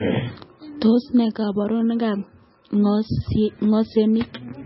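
From start to finish the speech sounds dull and watery, with nothing above 5.6 kHz, a swirling, bubbling texture, and onsets that smear instead of landing cleanly. The likely cause is heavy MP3 compression at a bitrate that fits roughly 18 kbps. Starved of bits, the encoder chops off the treble at a fixed point and drops the weaker frequency lines, which flicker in and out from frame to frame.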